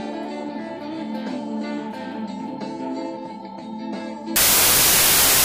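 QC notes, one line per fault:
4.36–5.44 s, samples built from the wrong bytes: the last 1.08 s turns into loud, harsh broadband noise. Each sample's bytes are assembled misaligned or in swapped order, so the rapidly changing low bits land in the high-order position and swamp the signal.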